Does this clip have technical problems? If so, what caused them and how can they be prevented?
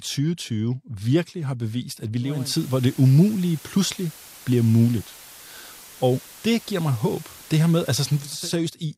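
Yes. From 2.20 to 8.51 s the digital radio is blending to analogue FM over 356 ms. Hiss rises to roughly 20 dB below the speech, and level shifts about 3 dB. Improving antenna placement or reception strength prevents this.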